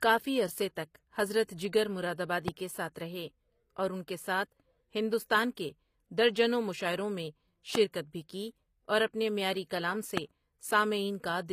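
Right through the speech there's plainly audible HE-AAC compression, nothing above 15.5 kHz. The treble is likely rebuilt from copied lower bands, consistent with roughly 24 kbps. Then come three loud pops, single sharp clicks at 2.48–2.50 s (about 15 dB above the speech), 7.75–7.78 s and 10.17–10.20 s (about 20 dB each), likely from voltage spikes.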